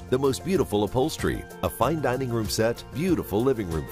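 Nothing is technically wrong with this audio.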